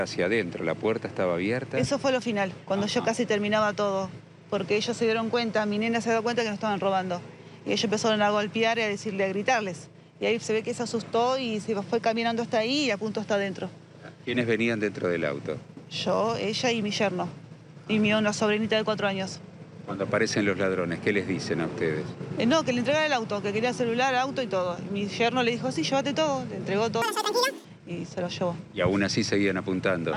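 From 27.02 to 27.65 s the sound races at double speed, an octave higher: audio read two samples at a time, halving the number of frames.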